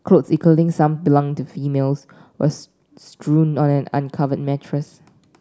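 No technical faults can be heard anywhere in the recording; the signal stays steady and intact throughout.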